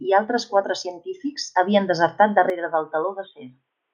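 Speech that turns dull and boxy at 2.5 s and stays that way to the end. All content above 3.8 kHz vanishes, the level drops by roughly 5 dB, and a faint new noise floor sits far below the speech. There is no gap at the change. The likely cause is an input switched to a poorer device. On a spectrogram, the upper band cuts off abruptly at 2.5 s, and the waveform's envelope steps down at the same point.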